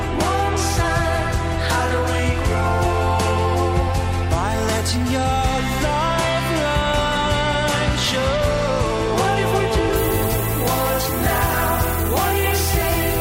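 At 9.96 s the audio drops to low bit depth with noise shaping, and it stays that way to the end at 13.20 s. Only about 4 bits carry the signal. Each rounding error is fed back and pushed upward in frequency. The result is a steady, thin hiss that climbs sharply toward the top of the band. That hiss sits nearly as loud as the sound itself, so it is plainly audible throughout.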